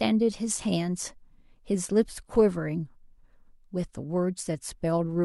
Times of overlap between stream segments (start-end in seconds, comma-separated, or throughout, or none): none